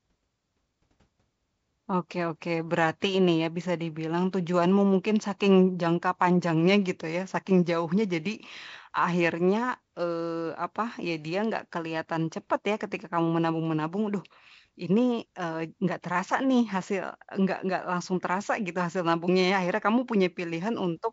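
No technical faults are audible.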